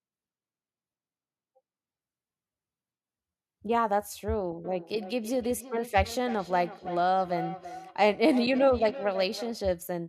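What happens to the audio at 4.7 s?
From 4.65 s to 9.71 s the speech starts coming back at itself: each stretch is followed by a fainter copy roughly a third of a second later, peaking at about 12 dB below the direct speech, with a hollow, ringing colour. This is feedback echo between two devices. A second device in the same room plays the call aloud, the first microphone picks that playback up and sends it round again, and neither echo canceller removes it.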